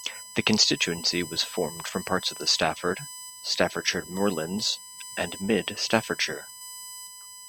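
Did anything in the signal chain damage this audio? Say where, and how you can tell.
Yes. USB whine sits under the speech throughout, a fixed 1 kHz tone strongest at 8 kHz and roughly 15 dB down. Bus frame current is leaking into the analogue power or ground.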